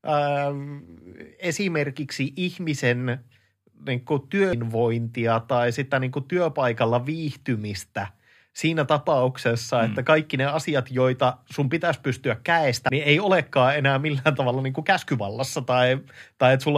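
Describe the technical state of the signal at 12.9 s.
At 12.89 s the speech is hit by damaged data in a compressed stream. The fault sits right after "joita sun pitäisi pystyä" and just before "niin ei olekaan enää". It is a single, near-instant event. Part of the encoded data there is corrupt. The decoder cannot read that frame correctly. It loses sync and hunts for the next valid frame header. The result is a sharp, momentary glitch that breaks the flow of the speech.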